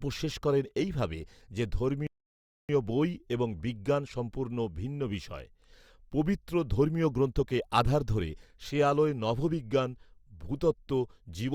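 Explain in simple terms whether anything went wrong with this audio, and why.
Something did go wrong: a playback stall. The player most likely ran out of audio data to send out, or was briefly held up by other work, so for a moment it had nothing to play. You hear the speech cut off mid-flow at 2.07 seconds and go completely silent for about 0.62 seconds, until 2.69 seconds. Then the speech picks up again once the player has caught up.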